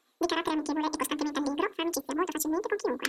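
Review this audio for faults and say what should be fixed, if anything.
Throughout, the speech plays twice as fast and a full octave (12 semitones) high. This is audio read two samples at a time (double speed): each pair of samples is taken as one frame, as though the stream were stereo or twice as wide. To prevent it, have the reader take channel count and sample width from the file header instead of assuming them.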